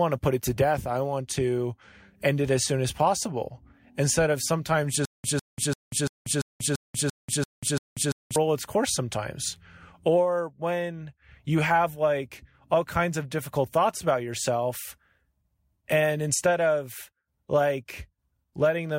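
From 5.05 to 8.36 s the speech falls into a stutter with silent gaps. A 153 ms fragment repeats nine times, separated by 188 ms of digital silence. The stream likely stalled, replaying its last fragment at each retry. Speech in that span is lost.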